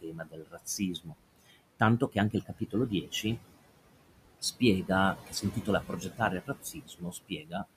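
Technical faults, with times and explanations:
throughout, noise suppressor artifacts: The room noise, sitting about 14 dB below the speech, sinks away between phrases and swells back under them. The suppressor is turning down bands it judges to be steady noise by about 21 dB, frame by frame.
0.01–1.17 s, 2.0–3.24 s, 5.18–6.21 s and 6.4–7.65 s, speech cut by the noise suppressor: Soft consonants and word endings sound swallowed or faint. Parts of the first and last spans, well over half a second each, are cut by up to about 21 dB. In the middle two, a few tenths of a second are cut by about 15 and 13 dB. The suppressor mistook quieter speech for noise and lowered it with the background.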